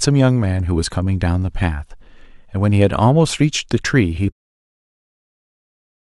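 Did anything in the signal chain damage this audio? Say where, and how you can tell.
No, nothing in the signal chain damaged this speech. The level eases down in a smooth fade-out from about 4.3 s, the kind an editor applies, with no abrupt edge at the end.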